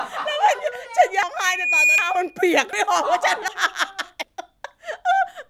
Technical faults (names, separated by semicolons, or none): audio missing between chunks; loudspeaker feedback squeal